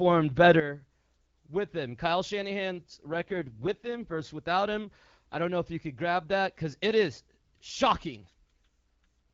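A sudden gain jump at 0.60 s cuts the level by about 12 dB in a single step, and it stays down to the end. Speech and background noise fall together. The likely cause is a gain setting or bit shift applied without a ramp.

An AMR rate drop from 3.10 to 4.23 s makes the speech rougher and more synthetic with no gap and no narrowing of the band, which fits the link pushing the AMR-WB codec from its clear 12.65 kbit/s mode down to 6.6 kbit/s before recovering.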